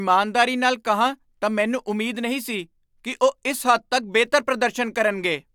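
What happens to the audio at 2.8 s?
Nothing goes wrong at 2.8 s: the speech continues cleanly through that moment, with no dropout, click, distortion or other fault to be heard.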